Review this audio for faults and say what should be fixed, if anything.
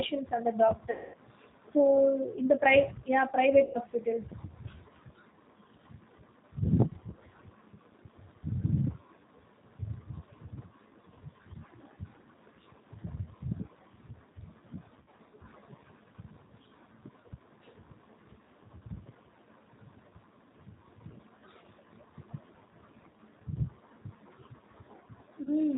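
The speech sounds rough, slightly synthetic and band-limited throughout, with nothing above 4 kHz, which fits the G.729 codec at around 8 kbit/s. It rebuilds each 10 ms frame from a vocal tract filter, pitch predictor and a few pulses. Prevent this by using a wideband codec.

Four dropouts turn into a stretched, buzzy tone or coloured noise that fades: 0.91–1.16 s, 3.64–3.79 s, 15.01–15.08 s and 25.43–25.51 s. This is VoIP packet loss concealed by the speech codec, with about 230, 100, 60 and 30 ms of frames extrapolated and weakened. Prevent it with forward error correction and a steadier network path.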